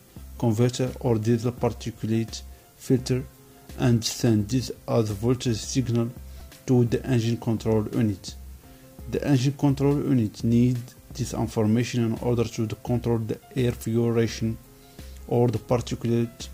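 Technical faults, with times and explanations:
6.40 s, repeated buffer: one 2.67 ms slice, which fits a 128-sample buffer, plays four extra times. The hard joins fuse into a brief buzz, costing about 10 ms of audio. Unlike a dropout, the gap holds copied sound, not silence.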